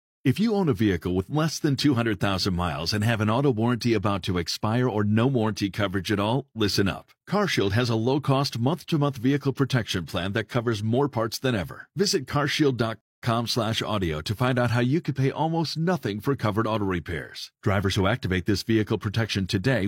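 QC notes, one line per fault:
13.01–13.22 s rebuffering stall: playback starves of data, goes silent for 214 ms, then resumes where it stopped; flat waveform gap, blank vertical spectrogram band.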